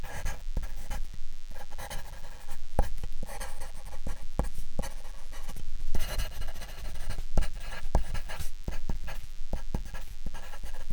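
A DECT cordless phone buzz runs through the whole clip. A nearby DECT handset or base transmits a radio burst 100 times a second. The audio circuit rectifies each burst. The result is a thin, steady 100 Hz buzz, rich in harmonics, sitting faintly beneath the sound.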